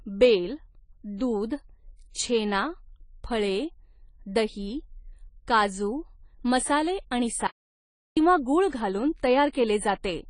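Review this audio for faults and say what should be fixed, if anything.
The speech was most likely passed through AAC compression at a low bitrate, and the damage is plainly audible throughout. Nothing survives above 10 kHz, so the top of the spectrum is missing and the speech sounds dull. The codec's quantisation against a hearing model smears detail, giving a warbling or fizzy texture on sustained sounds and sibilants. This fits AAC-LC at around 24 kbps. Encode at a higher bitrate, and keep a lossless master for any further processing.

From 7.47 to 8.17 s the input was lost and the recording carried on as pure silence: an audio dropout to silence lasting about 0.7 s. The likely cause is a disconnected device, a failed link or an accidental mute. The speech cuts out mid-flow, the gap holds no room tone at all, and whatever was said during it is gone for good. Secure all connections and monitor the input while recording so a loss is caught immediately.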